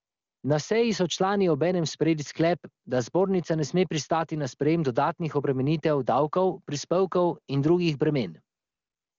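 From 0 to 0.43 s and again from 8.57 s to the end, AMR comfort noise replaces the real background: the phone stopped sending speech frames, so a smooth, steady synthetic hiss fills the gap, unlike dropout silence.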